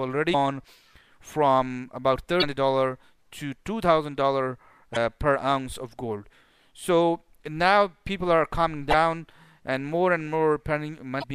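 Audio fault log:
0.30–0.35 s, 2.39–2.44 s, 4.93–4.97 s, 8.90–8.94 s and 11.20–11.24 s: damaged data in a compressed stream. Each event is a brief chirp or blip lasting about 40 to 45 ms. Part of the encoded stream is corrupt at these points. The decoder cannot read those frames correctly and loses sync. It then searches for the next valid frame header, and the garbled output in between is what you hear.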